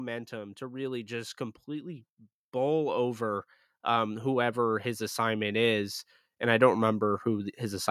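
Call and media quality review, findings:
Automatic gain rising, 0.29–7.86 s. Speech and background noise swell together, slow ramp of about 14 dB across the clip. AGC in capture path judged input too quiet and kept raising gain. Distinct from compressor pumping: steady climb, no dip-and-recover between phrases, noise floor lifts with speech.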